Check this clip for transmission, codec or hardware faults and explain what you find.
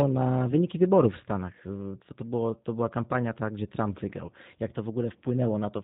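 Two faults are present: G.729 codec coding runs through the whole speech clip, and two short dropouts were concealed by the decoder.

G.729 codec, throughout: this 8 kbit/s coder models each 10 ms frame with a vocal tract filter, a pitch predictor and a few pulses, so the speech sounds slightly rough and synthetic. A spectrogram shows nothing above 4 kHz and smeared, grainy harmonics.

VoIP packet loss concealed by the speech codec, from 0.51 to 0.55 s, just before "wyborów w", and from 4.26 to 4.31 s: the decoder extended its last pitch and filter across missing audio, which fits one lost 10 ms frame and then two. The result is a brief, fading smear. On the waveform, amplitude sags. On a spectrogram, the harmonics flatten into steady horizontal streaks before recovering.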